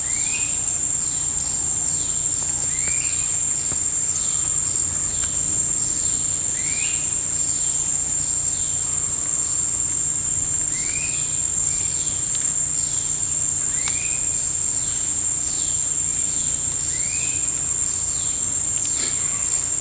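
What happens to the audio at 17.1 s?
Nothing goes wrong at 17.1 s; the audio is intact there, carrying only the normal band limit of the call's microphone processing with nothing above 8 kHz.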